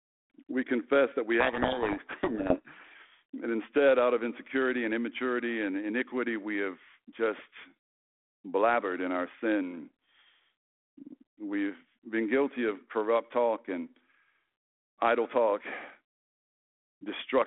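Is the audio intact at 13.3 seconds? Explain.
Yes, the audio is intact at 13.3 seconds, with the speech carried cleanly over the narrowband G.726 telephone path at that moment.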